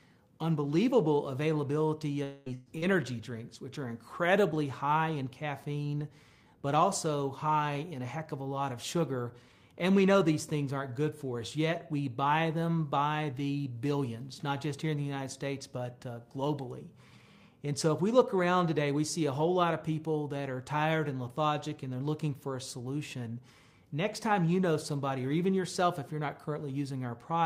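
At 2.23 s the sound stops arriving and the receiver stretches out the last moment for about 225 ms, to 2.49 s. It is heard as a held buzz or hiss that fades, and none of it drops to silence. When the audio returns, roughly 220 ms of material is gone. This is most likely a long network dropout. On a spectrogram the harmonic lines freeze into flat horizontal bands that lose energy, and the waveform shows a repetitive, decaying envelope with no true gap.

Inside that stretch, from 2.46 to 2.48 s, one 20 ms frame is a lost packet rebuilt from error correction. The next packet carried a low-bitrate backup copy of it, so the decoder played that copy rather than inventing the frame. It sounds grainier and noisier than its surroundings. A spectrogram shows a short vertical slice where fine detail turns to smeared noise.

From 2.54 to 2.69 s comes a burst of packet loss. About 120 ms in a row failed to arrive in time. 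The receiver carried the previous sound forward and turned it down across the gap, producing a brief held buzz or hiss that fades. The waveform shows a smooth, shrinking envelope. The spectrogram shows stalled, weakening bands, then a sudden jump to new content.

At 2.78 to 2.85 s, a short concealed packet loss hides 40 ms with a synthetic continuation that blends back in. It is heard as a quick smear or wobble. Within it, 2.82 to 2.84 s is a second error-correction rebuild, again a rougher, noisier 20 ms frame.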